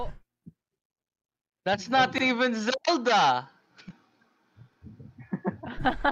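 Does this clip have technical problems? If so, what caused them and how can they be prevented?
Yes, there's a case of overlapping chunks. At 2.18 to 2.23 s and again at 4.73 to 4.78 s, a 50 ms slice of sound plays twice, so you get a quick stutter at each join. The audio was handled in 2.5 s chunks, and each new chunk started 50 ms before the last one ended, so that bit got doubled. To prevent it, advance each chunk by exactly its own length, or trim the overlap before joining.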